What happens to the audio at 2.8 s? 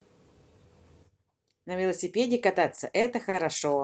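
At 2.75 to 2.79 s a short stall from a late packet occurs. The jitter buffer ran dry, so the receiver stretched the current speech sound by about 20 ms, then resumed with nothing lost. It is heard as a briefly held sound with a slight buzz or dip. A spectrogram shows frozen, horizontally smeared harmonics, and the waveform shows repeated near-identical cycles.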